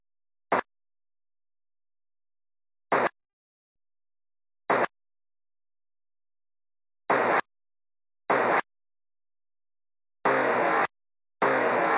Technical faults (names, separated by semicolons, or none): call audio freeze